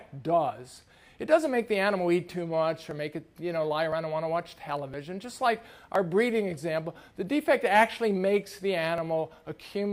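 Periodic USB or driver dropouts: from 2.91 s to 8.98 s, roughly 10 ms skips tick every 1.01 s, their strict regularity separating them from random glitches.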